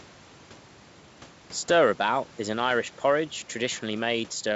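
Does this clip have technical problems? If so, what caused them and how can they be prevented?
No, there are no technical problems in this speech clip, so there is nothing to prevent. What can be heard is faint room noise sitting about 25 dB below the speech, and the bandwidth limit of G.722 wideband telephone coding at 64 kbit/s, which leaves the speech clear up to about 7 kHz.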